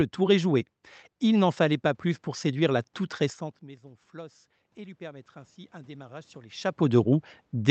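From 4.11 s right through to the end you get automatic gain rising. After the input drops by about 21 dB, the AGC treats it as too quiet and slowly winds its gain back up, so the voice and the room noise swell together over those last few seconds.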